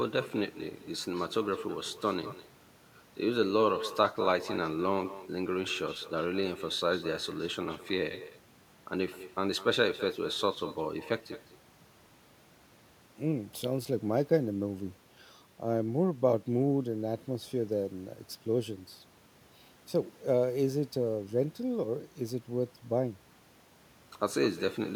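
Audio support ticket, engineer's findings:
Echo with no canceller, throughout: speech shadowed by a quieter copy, about 14 dB down, roughly 200 ms late. Far-end loudspeaker pickup returned uncancelled. Spectrogram shows faint delayed duplicate of each syllable.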